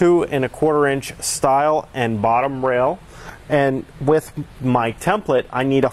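An adaptive stream at a lower bitrate takes over at 2.18 s and lasts to the end of the clip. The quality changes suddenly with no gap: the top end is cut, with nothing above 14.9 kHz, and the upper treble turns thinner while codec artefacts become more audible. The sound points to the player switching from a high-rate AAC version to a low-rate HE-AAC one, likely because the connection slowed.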